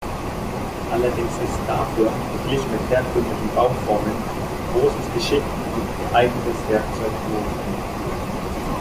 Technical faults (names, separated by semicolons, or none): none